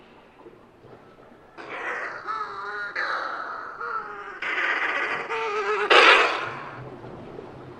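There are no technical faults to describe in this audio.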